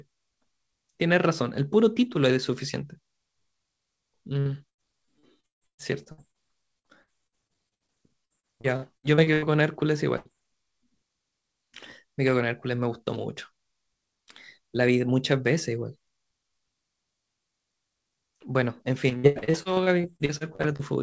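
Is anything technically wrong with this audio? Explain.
Yes. Repeated packet loss (robotic sound) runs from 4.40 to 6.37 s, 6.79 to 9.45 s and 19.09 to 20.82 s. Packets kept dropping, and each hole was bridged by extending the previous sound. Up to about a third of each stretch is concealed, with gaps up to 149 ms, so the speech turns choppy and mechanical.

A burst of packet loss hits at 10.17 to 10.35 s. About 90 ms went missing, and the receiver stretched the preceding sound over the gap while fading it, giving a brief held buzz or dying hiss. The speech then jumps ahead with that piece gone.

The call codec, which fits G.722, leaves nothing above 8 kHz.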